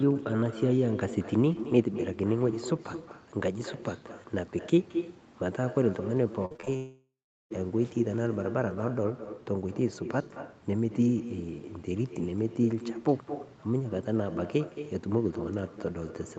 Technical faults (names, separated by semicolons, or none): echo with no canceller; repeated packet loss (robotic sound); long network dropout